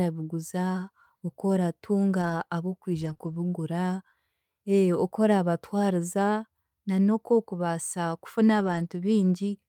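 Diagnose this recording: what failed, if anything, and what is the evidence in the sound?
Lost packets rebuilt from error correction at 2.21–2.31, 3.01–3.11, 3.21–3.35 and 8.59–8.85 s (after "na n'okwokubaasa kufuna"): a network fault; the decoder played low-bitrate copies, so these stretches sound rougher and noisier, without gaps.

Short concealed packet loss at 3.13–3.17 and 3.17–3.21 s: a network fault; two 20 ms holes were filled by extending the preceding sound, giving a brief smear or wobble.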